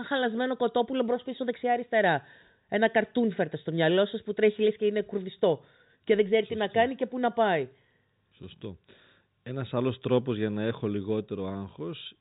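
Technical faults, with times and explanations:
No technical faults are present; the speech carries the ordinary telephone band of G.711 coding, with nothing above 3.8 kHz.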